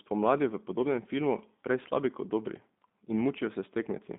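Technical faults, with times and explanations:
Throughout, G.729 codec: the speech is held within roughly 200 Hz to 3.6 kHz, with nothing above 3.7 kHz, and carries a plainly audible rough, buzzy, synthetic grain, which fits an 8 kbit/s coder. Each short frame is rebuilt from a vocal tract filter, a pitch predictor and a few sparse pulses rather than the real waveform. That rough, pulse-built texture is what separates it from simple telephone band-limiting, which only muffles the sound.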